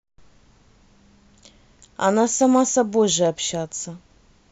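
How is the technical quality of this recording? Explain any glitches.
The recording has one glitch: hard clipping from 2.04 to 2.81 s. The speech there is about 2 dB too loud for the signal path. Its peaks are sliced flat, adding high harmonics. Because the overload is mild, it sounds like brief crackle on the loudest moments.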